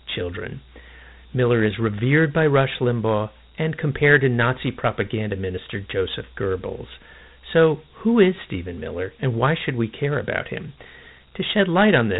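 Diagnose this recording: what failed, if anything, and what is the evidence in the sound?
The failure is at the codec stage: Dialogic VOX ADPCM. Throughout, nothing sounds above 3.9 kHz, and a gritty hiss trails the speech. That hiss is plainly audible. Coarse 4-bit steps track the waveform poorly. The band fits 8,000 samples a second, about 32 kbps.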